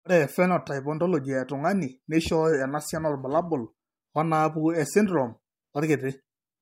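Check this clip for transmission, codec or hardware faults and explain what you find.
No faults found; the speech runs clean throughout.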